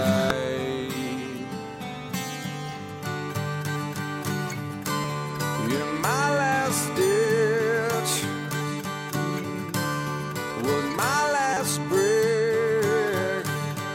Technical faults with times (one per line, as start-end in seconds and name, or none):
0.30 damaged data in a compressed stream
5.04 damaged data in a compressed stream
11.53-11.57 damaged data in a compressed stream